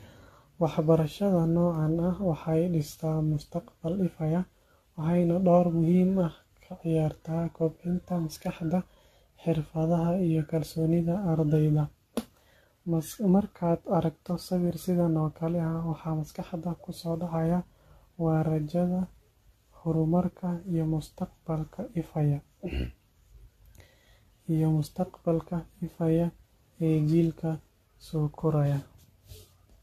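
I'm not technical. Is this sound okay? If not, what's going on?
No. The speech sounds swirly, smeared and hollow from start to finish. Sharp sounds blur, and the top end is missing. This is generation loss, likely from being squeezed and unpacked around seven times, each round adding fresh damage.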